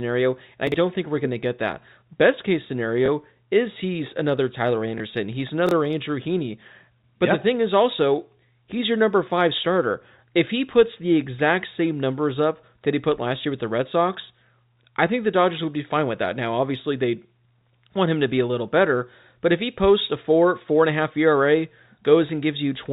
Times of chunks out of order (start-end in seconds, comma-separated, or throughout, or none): 0.67-0.74, 5.67-5.71